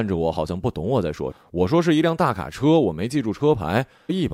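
At 1.30 to 1.32 s, and again at about 4.09 s, the speech is broken by a short blip caused by damaged data in the compressed stream. In both places some bytes of the encoded audio were corrupted, so the decoder could not read those frames correctly. It lost sync and had to search for the next valid frame header. Each event lasts only around 20 ms.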